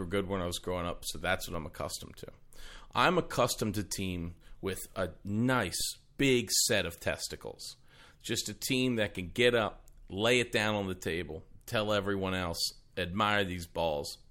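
A low thump sounds at 1.54 s, between "up so that's what" and "I'm accustomed to", and again at 5.81 s, just before "big set of testicles". Each is a DC step: the zero line jumps by about -32 dBFS, then decays through a 5 Hz high-pass while the speech continues unchanged.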